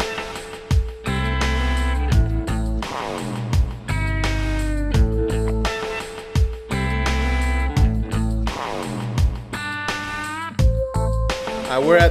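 Nothing goes wrong anywhere in this recording, so there's no fault to point to at any moment.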